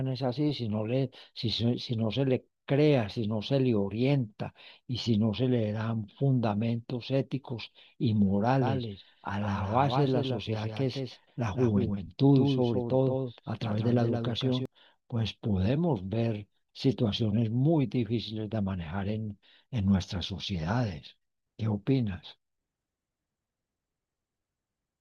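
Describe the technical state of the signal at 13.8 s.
At 13.8 s the speech carries a doubled audio track, running from 8.62 to 14.66 s. A full-band copy trails about 150 ms behind, roughly 5 dB quieter, with no decay or room colouring. This is likely from a second, slower capture path or an edit holding two out-of-step copies. It sounds like a dry slapback echo. On a spectrogram every syllable's pattern repeats, slightly fainter, a fixed distance to the right. The waveform shows overlapping envelopes, and the copy switches on and off abruptly at the span's edges.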